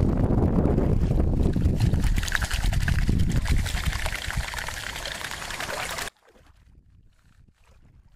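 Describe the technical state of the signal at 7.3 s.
At 7.3 s the signal is in an audio dropout to a faint residue. It runs from 6.08 s to the end of the clip. The sound cuts off abruptly. Only a faint leak remains, roughly 30 dB below normal level. The likely cause is a lost signal while the downstream path stayed live.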